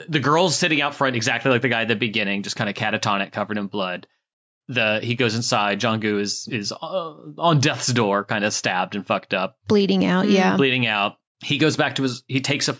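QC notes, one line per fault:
No faults found in the speech. The call microphone processing is audible as a band limit at about 8 kHz with the lowest bass trimmed away, which is normal for that path.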